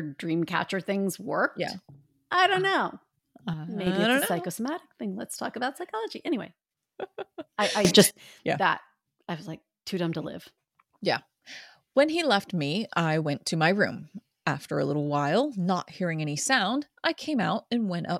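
At 3.54 s, after "I don't know", and at 7.85 s, after "I I", a sudden gain jump hits: speech and background noise drop together by about 6 dB until 3.87 s, then rise by about 15 dB until 8.11 s, before "yeah that I was". The likely cause is an unramped step in digital gain, which is why the noise floor moves with the speech.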